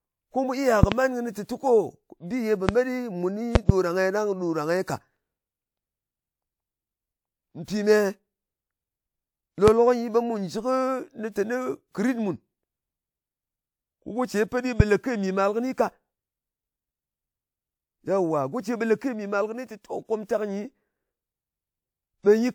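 Loud pops occur at 0.83–0.94 s and 3.55–3.72 s (two each), and singly at 2.69–2.71 s, 9.68–9.70 s and 14.80–14.83 s, just before "lē ke mì màl". They are likely voltage pulses from a plug, switch, static or driver glitch, and stand about 20 to 25 dB above the speech. On the waveform they are tall spikes; on a spectrogram, thin full-height vertical stripes.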